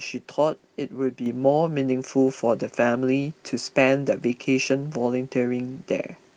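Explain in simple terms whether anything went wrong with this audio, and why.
Microphone volume stepped up at 1.26 s: the calling software judged the microphone too quiet and turned its input level up all at once. The speech and the background noise both suddenly get louder together at that moment, rather than rising gradually.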